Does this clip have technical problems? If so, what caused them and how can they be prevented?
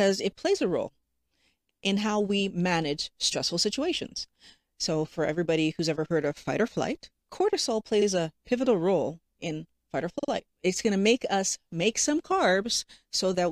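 Yes. Repeated frames: short runs of compressed frames reached the decoder more than once, so it played the same stretch of audio again. At 1.69 s, just before "in how we manage", a 0.13 s block repeats. At 8.01 s, after "fight or flight cortisol", a 0.05 s block plays twice. At 10.18 s, after "role in fight or", a 0.05 s block sounds three times. Each one is heard as a stutter. To prevent it, discard duplicate frames by sequence number or timestamp before decoding.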